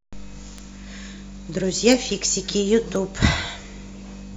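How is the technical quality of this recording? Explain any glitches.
Three isolated clicks mar the speech: bit error spikes at 0.58 s, 1.92 s and 2.96 s. Each is a single flipped bit in a digital sample, pushing a run of three samples far from their true value before they snap back, reaching about -20 dBFS at 0.58 s and 2.96 s and about -14 dBFS at 1.92 s. Each is heard as a brief, sharp tick with no relation to the speech. On a waveform they appear as thin needles; on a spectrogram, as hairline vertical streaks spanning all frequencies.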